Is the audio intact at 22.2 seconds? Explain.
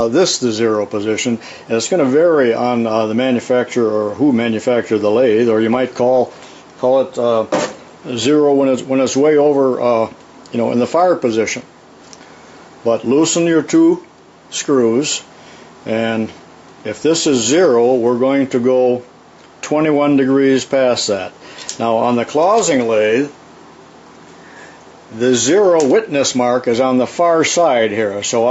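Yes, the audio at 22.2 seconds is intact, with no dropout, glitch or other fault at that moment.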